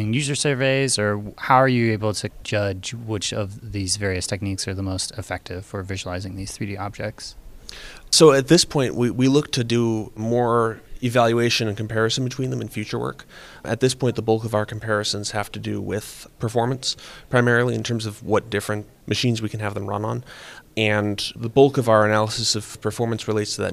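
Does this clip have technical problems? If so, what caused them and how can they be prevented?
No, this clip has no technical problems, so there is nothing to prevent.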